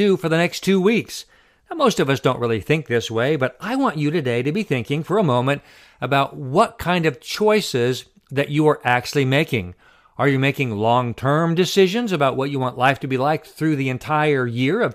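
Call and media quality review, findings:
No faults found on this speech recording.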